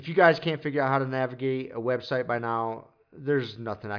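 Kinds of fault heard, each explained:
No kinds of fault are heard in this speech clip.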